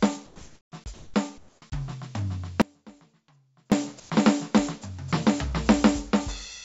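In the quiet stretches of this music, the real background is replaced by comfort noise from 0.26 to 0.72 s, 0.94 to 1.14 s and 1.38 to 1.62 s. Each time the real background gives way to a steady, featureless hiss. Its level differs from what it replaces: about 2 dB lower in the first patch, about 9 dB higher in the second and about 5 dB lower in the third. The likely cause is discontinuous transmission: the sender's voice detector judged the music silent and stopped sending, so the receiver synthesised noise shaped only roughly like the background. What sets this apart from a dropout is that the gap holds plausible noise at near-normal level rather than near-silence.

At 1.60 to 1.62 s, the sound re-enters with its onset clipped by the voice detector. The first 20 ms were never sent and comfort noise stood in for them, so the attack begins abruptly, with no soft rise. The likely cause is a detector slow to notice the sound returning.

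From 2.62 to 3.72 s comes an audio dropout to a faint residue lasting about 1.1 s. The music cuts out abruptly in mid-flow, and the gap holds only a faint trace far below normal level, then the music returns just as suddenly. Unlike the comfort-noise patches, there is no filling noise. This likely reflects the signal being lost while the path after the break stayed live.

A final comfort-noise patch replaces the background from 4.00 to 4.10 s, about 1 dB quieter than the real background. Throughout, nothing is heard above 8 kHz, which fits a G.722 call link.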